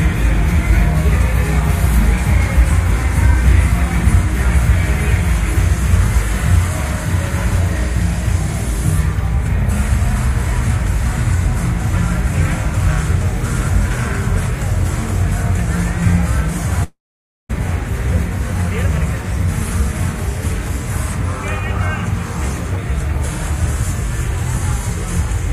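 A long network dropout runs from 16.83 to 17.51 s in this clip of sounds. The last sound is stretched into a fading buzz or hiss, then about half a second of silence follows before the audio resumes with roughly 0.66 s missing, likely from lost packets.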